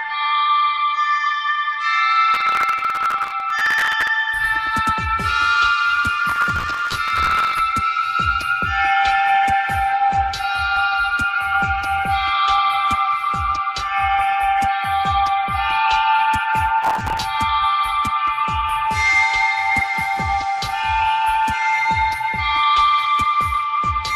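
From 2.34 to 4.08 s, 6.29 to 7.59 s and 16.83 to 17.22 s there's processor overload crackle: the machine keeps missing deadlines on tiny buffers of around 5 ms, replaying stale audio each time, so dozens of hard-edged repeats pile up into a gritty tearing over the sound.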